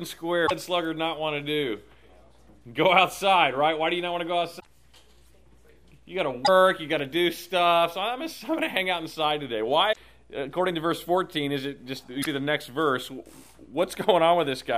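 Five short bursts of damaged data in the compressed stream hit at 0.43, 4.59, 6.42, 9.89 and 12.19 s, each around 70 to 85 ms. Bad bytes throw the decoder off its frame sync, so you get a brief chirp or blip while it hunts for the next good header.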